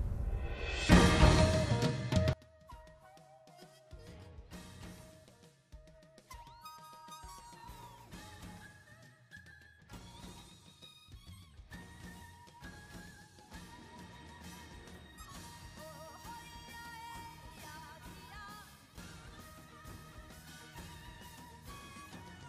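From 2.33 s to the end, the sound falls by about 28 dB to a faint residue; one channel inverted, cancelling on mono summing, is the likely cause, not simple level loss.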